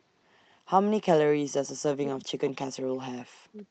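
From 1.95 to 2.69 s the speech is suppressed in double talk: the level drops in pieces, by as much as about 40 dB, for roughly half a second in total. This is likely an echo canceller turning everything down while both sides spoke. On a waveform the envelope collapses into near-flat gaps. On a spectrogram, energy up to the 8 kHz band edge of the call path fades or vanishes in vertical blocks.

Overlapping this, from 2.46 to 2.84 s, there is an echo leak. A faint copy of the speech returns 320 ms late, roughly 20 dB below the direct sound. It is likely loudspeaker pickup that the loudspeaker side's canceller did not fully remove. A spectrogram shows the same harmonic patterns repeated, weaker and shifted right by about a third of a second. On the waveform it appears as a low-level tail filling what should be quiet space.

From 3.14 to 3.67 s the speech is suppressed in double talk again. 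It is attenuated for roughly 0.4 s in total, with dips reaching about 40 dB. Once more the likely cause is the canceller ducking during simultaneous talk. The waveform thins to short broken fragments, and the spectrogram loses its upper harmonics or whole frames go dark.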